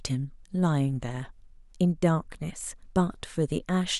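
Clock slip clicks run from 0.10 s to the end at 3.99 s, roughly seventy faint, evenly spaced ticks about 70 ms apart under the speech. They are likely from two unsynchronised device clocks drifting a few hundred parts per million apart, dropping or repeating one sample per slip.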